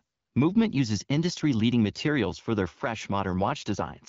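No technical faults can be heard in the speech; it has passed through the AMR wideband (HD Voice) codec at 12.65 kbit/s, which is working as intended and leaves only light coding damage on the band-limited signal.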